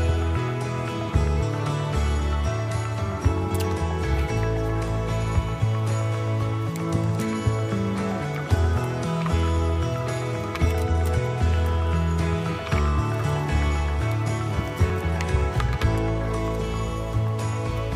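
At 13.24 s there is an abrupt jump in the audio, and at 14.9 s a second, larger jump, roughly 20 ms and 40 ms of material missing respectively, with no gap of silence at either join. The likely cause is a dropped buffer (overrun): the capture side fell behind, the hardware overwrote samples before they were read, and the surviving audio on each side was spliced directly together.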